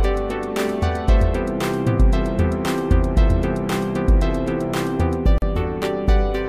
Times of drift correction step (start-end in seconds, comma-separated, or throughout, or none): none